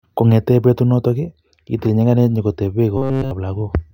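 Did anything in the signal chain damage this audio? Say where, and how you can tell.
Yes. From 2.97 s to 3.31 s the speech collapses into robotic sound from repeated short buffers: a rigid, metallic buzz pinned at 133 Hz that only loosely tracks the speech, holding through the whole span. This points to the driver or buffer stage, likely starved of input, so the same snippet of about 7.5 ms, one period of 133 Hz, is replayed while the fresh audio is dropped.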